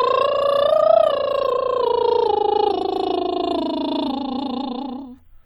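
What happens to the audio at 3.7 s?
Nothing goes wrong at 3.7 s: the music plays straight through that moment without any dropout, click, distortion or other audible fault.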